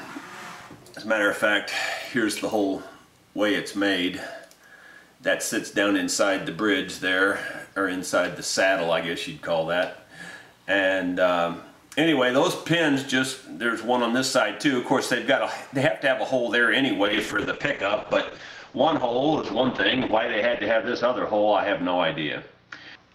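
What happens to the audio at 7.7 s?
Nothing goes wrong at 7.7 s; the audio plays through that moment intact, with no dropout, click or distortion.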